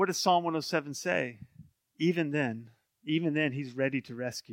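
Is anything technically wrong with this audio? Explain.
Yes, there's a short burst of loose connector crackle from about 0.62 to 0.65 s in the speech. It sounds like an irregular scratchy crackle, over in roughly 30 ms. What's going on is a worn or dirty contact somewhere in the cable or jack path that briefly makes and breaks as it shifts. That chops the signal on and off very fast, and any DC sitting on the line turns each break into a little pop, hence the scratchy texture.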